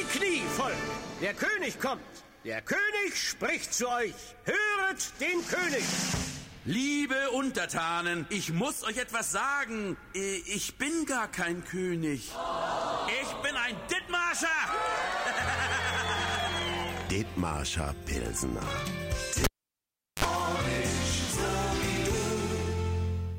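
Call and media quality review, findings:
Pop at 19.44 s, then near silence for about 0.75 s, a short 50 Hz buzz of about 51 ms, and a second pop as the sound returns at 20.25 s. Cable pulled and plugged in: live connector removed and reseated, hum picked up while only the tip made contact. Probable component: input cable or jack.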